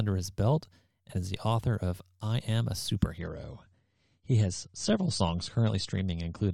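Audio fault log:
3.18–6.53 s, adaptive stream at a lower bitrate: the treble abruptly vanishes above 9 kHz with no gap, and codec artefacts rise as the stream drops to a lighter encoding, which points to roughly a third of the earlier bitrate. The spectrogram shows a flat ceiling appearing suddenly; the waveform stays continuous.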